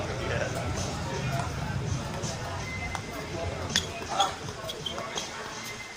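No technical faults are audible.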